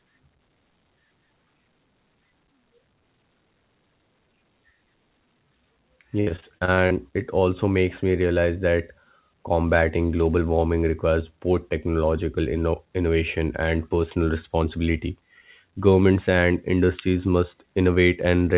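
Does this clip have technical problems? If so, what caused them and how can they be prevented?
Yes. From 6.2 to 6.93 s, just before "it also makes me", the speech turns choppy and robotic. This is repeated packet loss. Eight short gaps hit in quick succession, the longest about 63 ms. Each gap is patched by stretching the last bit of sound, which gives the robotic tone. About a third of that stretch is concealment rather than real speech. The call path, which cuts everything above 4 kHz as G.711 does, is not the cause. A steadier network link, or a larger jitter buffer, would prevent it.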